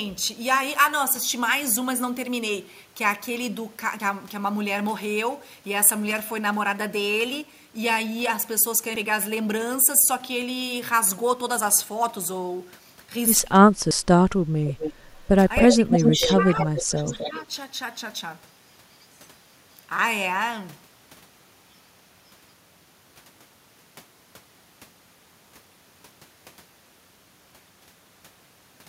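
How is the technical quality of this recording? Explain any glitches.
The recording has three kinds of glitches: regular skips, a leaked echo, and speech ducked during overlapping talk.

Audio missing between chunks: at 4.00, 8.95 and 13.91 s, about 40 ms vanishes, likely at 5-second processing-chunk boundaries. Each is heard as a tiny jump and shows as an abrupt waveform splice.

Echo leak: at 14.68–14.93, 15.56–15.76, 15.92–16.43, 16.59–16.82 and 17.07–17.40 s, a copy follows 263 ms behind, mostly about 10 dB down. It is likely from incomplete echo cancellation. On a spectrogram it appears as ghost harmonics trailing the originals.

Speech suppressed in double talk: from 15.62 to 17.52 s, the talker dips by up to about 10 dB, for roughly 1.5 s in total, while the other side speaks. This is likely the canceller ducking everything. It appears as sagging waveform envelopes.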